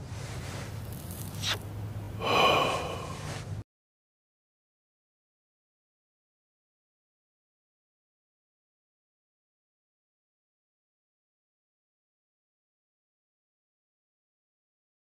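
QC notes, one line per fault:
2.04–2.08 s, repeated buffer: a short slice sounds three times with hard joins, giving a brief buzzy stutter. The repeat length fits a 20 ms buffer replayed when new audio arrived late; practically nothing is lost.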